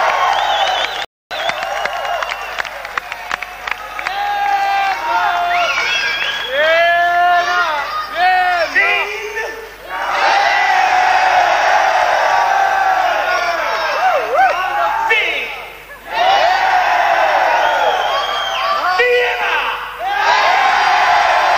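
At 1.05 s the audio halts in a rebuffering stall, going silent until 1.31 s before resuming exactly where it stopped. The player ran dry of downloaded data and waited, adding about 0.26 s. The waveform shows a flat gap, and the spectrogram shows a blank vertical band.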